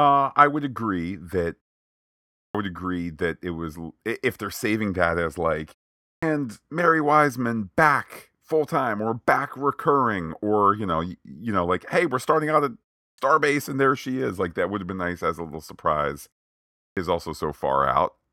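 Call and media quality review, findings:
Clipped start after a pause, 2.44, 6.11, 13.08, 16.86 s: output device sleeps during silence, wakes late, swallowing the first 100–115 ms of each speech onset.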